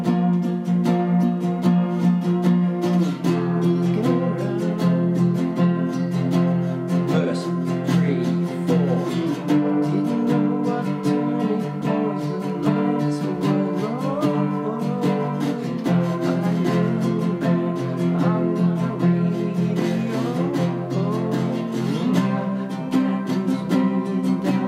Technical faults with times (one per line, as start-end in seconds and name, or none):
none